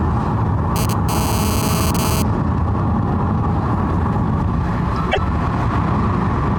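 A recording of everyday sounds carries two faults. From 0.76 to 2.22 s there is GSM phone buzz. A hard, raspy tone at 217 Hz, rich in harmonics, sits about 7 dB below the sound. It comes and goes, as happens when a nearby 2G phone transfers data and the audio circuit rectifies its radio bursts. From 5.11 to 5.18 s, a span of 70 ms, the sound briefly turns garbled and jumps forward. That fits about three MP3 frames of 26.1 ms. The likely cause is a broken MP3 bit reservoir: frames were lost, and the frames after the gap decoded borrowed bytes from the wrong data.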